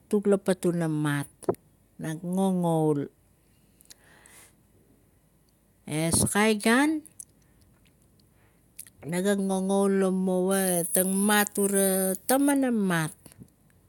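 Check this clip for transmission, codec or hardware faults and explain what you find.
Pre-emphasis left on from 10.51 to 12.51 s: a 75 µs treble boost went uncorrected, lifting 10 kHz about 14 dB, so the speech turns thin, bright and sibilant.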